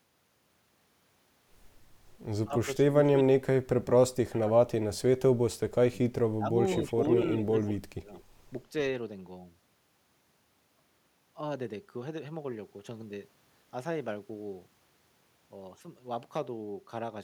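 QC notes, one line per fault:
2.44–5.21 s, 5.91–6.57 s, 6.9–7.04 s, 7.44–8.11 s: speech suppressed in double talk. The level dips by about 35 dB at worst, 25 dB in the second and fourth and only 5 dB in the brief third. Most likely the echo canceller mistook overlapping talk for echo and attenuated it. The waveform shows envelope notches, and the spectrogram shows thinned or blanked bands.
6.85–6.92 s, 7.25–7.73 s, 8.17–8.22 s: echo leak. A faint copy of the voice trails it by 168 ms, about 15 to 30 dB down. This is likely residual loudspeaker pickup that escaped cancellation. The spectrogram shows weak duplicated harmonic traces offset in time, and the waveform shows small ghost bursts.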